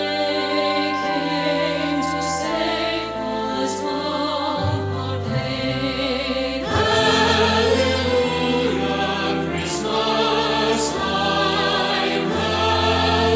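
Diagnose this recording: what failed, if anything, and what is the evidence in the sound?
Nothing failed: the sound shows only the normal signature of call microphone processing, with the lowest bass trimmed by its high-pass filter and no content above 8 kHz, and no stage from capture to playback leaves any audible defect.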